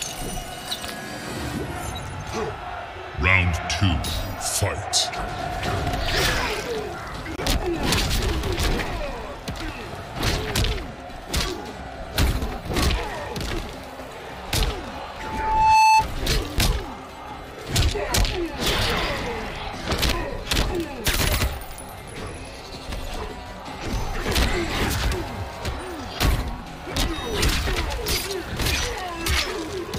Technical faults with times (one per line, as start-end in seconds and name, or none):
15.19-16.06 loudspeaker feedback squeal